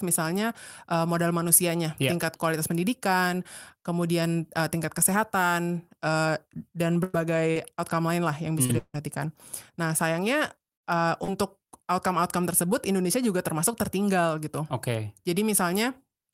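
From 7.03 s to 8.98 s, repeated packet loss produces choppy, robotic speech: four gaps, the longest 157 ms, are patched by extending the preceding sound, covering about 17% of that stretch.

At 11.24 s to 11.32 s, a short concealed packet loss fills roughly 37 ms with continued sound, heard as a brief smear or wobble before the real audio blends back in.

Within that, from 11.28 s to 11.30 s, a lost packet is rebuilt from error correction. The 20 ms low-bitrate copy plays without a gap but sounds rougher and noisier.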